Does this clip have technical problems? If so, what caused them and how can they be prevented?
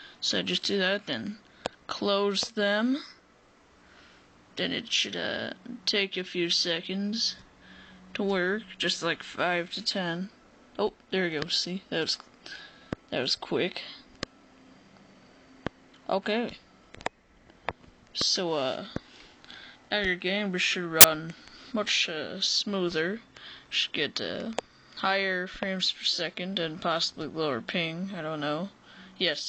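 Yes. At 21.01 to 21.04 s there is a short, very loud burst of white noise with hard edges. This is file tags played as audio: an embedded cover picture's compressed data was read as samples. Prevent it by having the player or decoder skip tag blocks before decoding.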